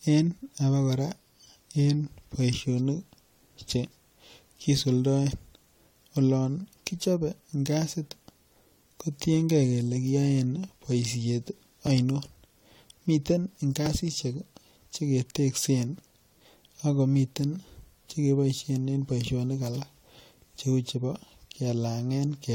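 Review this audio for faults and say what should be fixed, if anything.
Two brief skips occur in the speech, from 11.87 to 11.89 s just after "kotienge kole kiyoen boisiet", and at 13.86 s. Each is an overlap between stream segments. Two 1-second segments carried overlapping timestamps, so the player discarded about 20 ms of real audio and the waveform jumped. Segment timestamps should be generated contiguously so adjacent segments never overlap.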